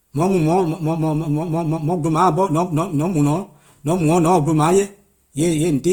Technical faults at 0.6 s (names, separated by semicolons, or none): Opus compression